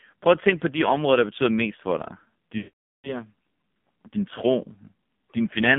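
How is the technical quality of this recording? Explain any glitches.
The technical quality is poor. The recording has gone through a heavily compressed narrowband mobile call path and has one clear break in the middle.

Throughout the clip there is AMR narrowband mobile codec damage. The line is limited to roughly 150 Hz to 3.5 kHz, so the audio is thin and muffled with no top end. The speech codec rebuilds the voice from a vocal-tract model excited by a few pulses per subframe. At this low bit rate, the 5.9 kbps mode, that leaves a buzzy, synthetic voice, with heavy coding damage on every syllable.

From 2.58 s to 3.22 s there are lost AMR speech frames. Radio errors corrupted a run of frames, about 460 ms of lost audio, which fits roughly 23 frames. The decoder covered the gap by repeating the last good pitch and vocal-tract parameters at falling gain. You hear the sound smear and stretch, then fade into silence within a fraction of a second. 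When good frames resume, the voice returns briefly weak and rough before settling.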